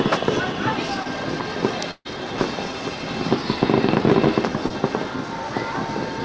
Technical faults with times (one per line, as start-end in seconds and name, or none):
1.03-1.07 short concealed packet loss
1.91-2.07 burst of packet loss
4.67-4.72 short concealed packet loss